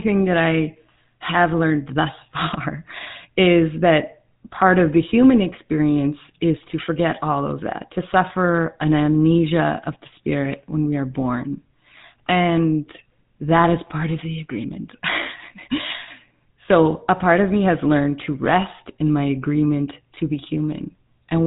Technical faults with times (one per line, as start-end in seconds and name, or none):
0.00-21.47 GSM full-rate codec